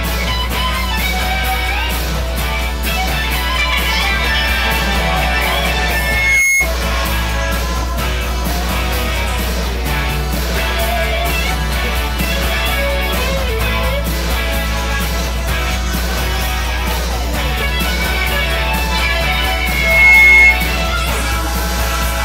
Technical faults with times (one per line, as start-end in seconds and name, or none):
5.89-6.70 loudspeaker feedback squeal
19.49-20.60 loudspeaker feedback squeal